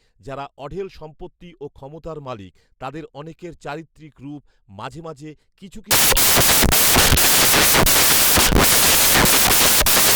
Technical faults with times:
5.91-10.15 samples built from the wrong bytes

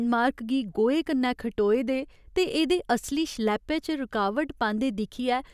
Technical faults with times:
none

